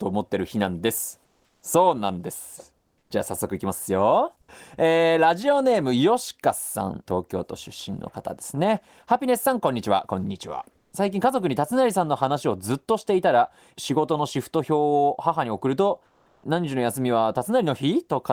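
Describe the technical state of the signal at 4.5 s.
At 4.5 s the speech signal is intact, with no audible fault at that point.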